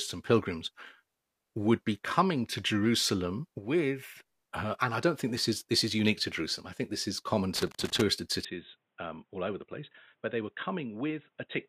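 A speech clip with two problems. Right after "think this is common", from 7.56 to 8.02 s, there's a rough burst of loose connector crackle, a scratchy, irregular chatter where a worn or dirty contact is making and breaking, chopping the signal and popping on any DC present. Then at 8.45 s, with no gap at all, the sound goes dull and boxy through to the end. Nothing gets through above 3.9 kHz, the level drops by roughly 5 dB, and faint new background noise sits well under the speech. That's most likely the input switched to a poorer device, such as another mic or a headset's call profile.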